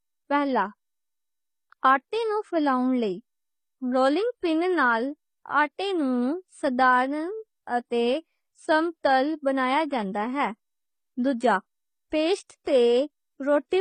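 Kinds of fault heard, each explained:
Transcoding between lossy codecs: throughout, nothing above 9.5 kHz and stacked artefacts heard together, likely from successive AAC-LC and HE-AAC coding, each adding its own.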